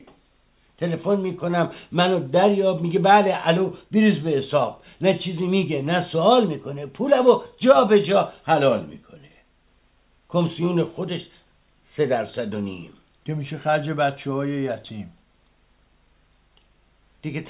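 Nothing stood out on listening; no technical fault could be heard anywhere in the recording.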